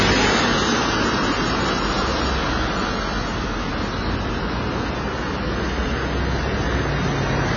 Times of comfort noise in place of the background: none

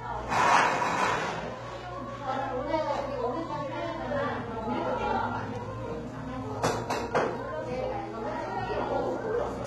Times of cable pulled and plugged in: none

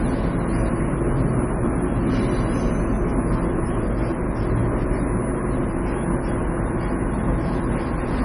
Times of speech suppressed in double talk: none

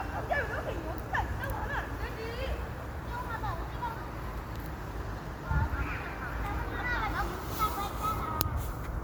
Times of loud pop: none

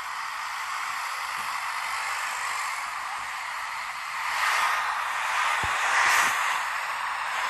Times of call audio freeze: none

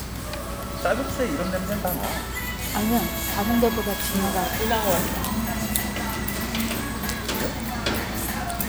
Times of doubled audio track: none

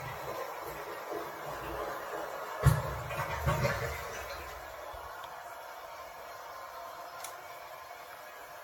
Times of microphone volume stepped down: none

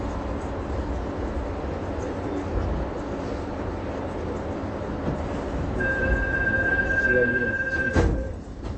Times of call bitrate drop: none

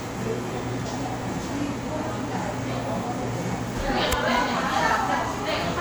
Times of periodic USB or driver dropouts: 0.22-5.23

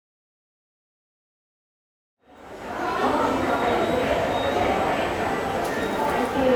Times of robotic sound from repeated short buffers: none

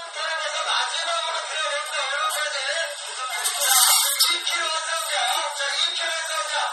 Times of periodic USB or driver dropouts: none

